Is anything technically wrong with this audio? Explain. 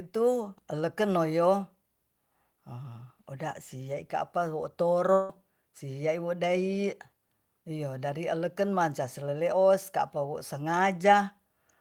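Yes. From 5.13 to 5.30 s the speech gives way to a fading buzz-like continuation of the preceding sound, with no silent gap before it resumes. This is likely a long network dropout: the receiver synthesised about 160 ms of fill, and that stretch of speech is lost.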